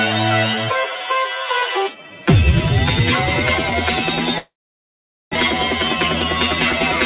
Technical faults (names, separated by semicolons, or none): long network dropout